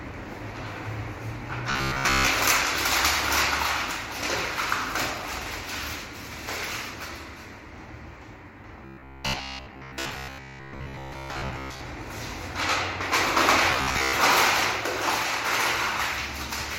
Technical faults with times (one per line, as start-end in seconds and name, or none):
1.70-2.27 robotic sound from repeated short buffers
8.86-11.81 robotic sound from repeated short buffers
13.71-14.14 robotic sound from repeated short buffers